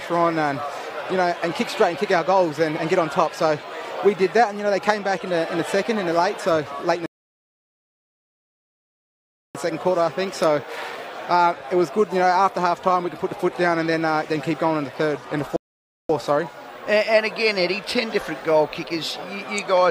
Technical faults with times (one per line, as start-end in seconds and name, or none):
7.06-9.55 rebuffering stall
15.56-16.09 rebuffering stall